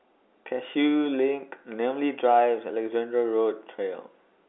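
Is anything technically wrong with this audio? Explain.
No, nothing technically wrong can be heard in this speech clip. It carries the G.711 telephone coding of a phone line, with the sound held to roughly 300 Hz to 3.5 kHz, nothing above 3.8 kHz, and only faint coding texture, which fits 64 kbps A-law.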